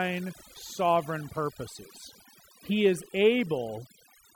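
Overdone noise removal affects the whole speech clip. Set too strong, the noise reducer shut off bands near its noise estimate, taking quiet voice detail too. Pauses fall near-silent with twinkling specks. A spectrogram shows scattered dots between phrases and patchy, eaten-away harmonics.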